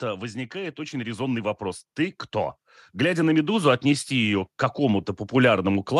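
From 0.51 s to 2.27 s the level climbs steadily by about 7 dB, the signature of automatic gain rising. The gain control judged the incoming speech too quiet and raised its gain over roughly 1.8 s. Because the gain applies to the whole signal, the background swells along with the voice. It sounds like a slow fade-up rather than a speaker moving closer.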